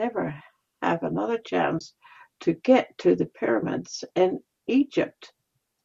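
AAC frame loss with muting at 1.79 to 1.81 s opens a brief hole of about 20 ms in the speech, which fits two lost low-delay frames of roughly 10 ms each. The decoder, likely AAC-ELD, zeroed the spectrum for the missing frames, and the overlapping windows on either side fade the sound down into the gap and back up out of it, so it comes across as a soft-edged dropout.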